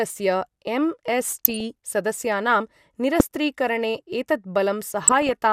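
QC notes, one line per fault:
1.26–1.61 s, 3.15–3.36 s and 5.03–5.33 s: DAB burbling. Noise blips sit over the speech. Bit errors are slipping past error correction into the MP2 data. Corrupted samples put short blips of noise in single sub-bands, and corrupted scale factors, where they get through, make sub-bands jump in level for up to a frame. The sound points to an error rate well under one percent.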